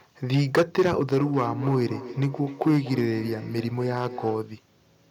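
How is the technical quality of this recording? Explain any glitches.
The quality's rough, with two separate problems stacked on top of each other.

Hard clipping runs through the whole clip. The level was pushed about 11 dB past what the chain could pass, so the loudest peaks, a couple of percent of the samples, get sliced flat. That flattening adds harsh high harmonics, heard as crackly fuzz on every loud syllable.

Feedback echo between two devices shows up from 1.17 s to 4.51 s. A second device in the room is playing back what this microphone sent, and the microphone hears it again. The local echo canceller only removes its own playback, so the speech returns roughly every third of a second, peaking about 12 dB below the direct speech, thin and ringy.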